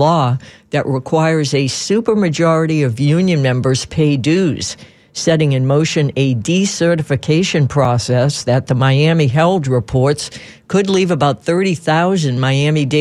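At 7.85 s, a block of digital silence about 4 ms long cuts into the speech. The sound drops abruptly to silence and returns with no fade, so it is heard as a tick or dip. The waveform shows a brief flat line, and the spectrogram shows a thin vertical broadband stripe.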